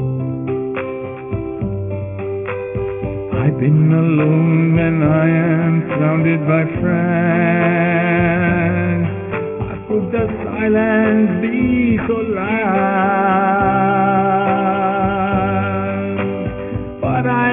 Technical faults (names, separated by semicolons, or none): aliasing